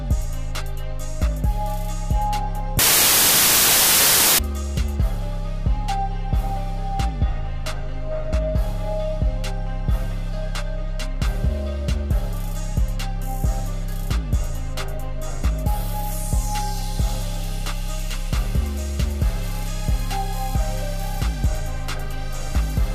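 From 2.79 s to 4.39 s the audio collapses into loud, broadband hiss: samples built from the wrong bytes. For about 1.6 s the reader assembles each sample from misaligned or swapped bytes, so the rapidly varying low-order bits land in the high-order position and dominate every value. The result is harsh noise at high level, close to white on the louder sounds.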